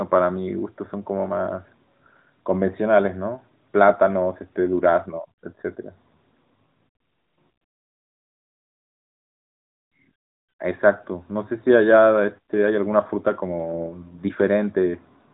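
No faults to report: the speech carries the band-limited character of the AMR narrowband mobile codec, with nothing above 4 kHz and only light coding texture, which fits its top 12.2 kbps mode.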